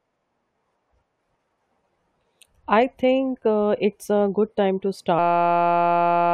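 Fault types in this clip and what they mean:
System hang loop: At 5.19 s, right after "a good time to", the speech stops and a steady buzz takes over until the clip ends. The computer or its audio driver froze. The sound hardware kept replaying one tiny stretch of its ring buffer. That stretch is 5.8 ms long, which fits a 256-sample buffer. It repeats 198 times, giving a tone at about 172 Hz. Roughly a second of real audio is lost.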